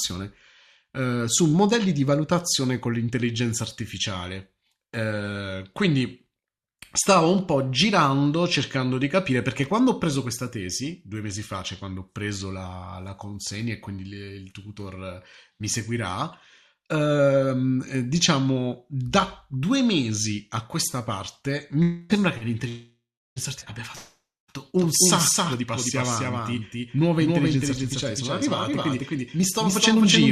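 From 24.8 s to the end, the speech carries a doubled audio track: a second, full-band copy trails the original by roughly a third of a second at a level a few decibels lower, about 5 dB down. The copy has no reverb tail or room colouring. It switches in abruptly, so syllables are restated as a hard slap rather than a decaying echo. The likely cause is the same signal reaching the mix twice, once through a slower capture path.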